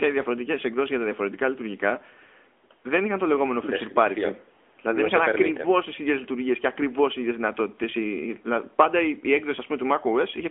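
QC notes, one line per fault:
Throughout, AMR narrowband mobile codec: the speech is confined to a phone-line band of about 250 Hz to 3.5 kHz, with nothing above 3.7 kHz, and it carries a plainly audible buzzy, synthetic edge. Each 20 ms frame rebuilds the voice from a vocal-tract model and a few pulses, which fits a mid-rate mode near 10.2 kbps. A simple band-limit filter would dull the sound without this coded, artificial grain.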